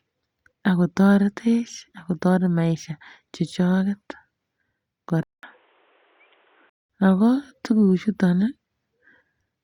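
At 5.23 s the speech stops for a 200 ms gap, then returns dull and boxy, with nothing above 3.8 kHz, a few decibels quieter, and carrying a new, faint background noise well below the speech. This is most likely an input switched to a poorer device, such as another microphone or a headset's call profile, with its own narrower band, tone and noise. The full-band sound returns at 6.90 s.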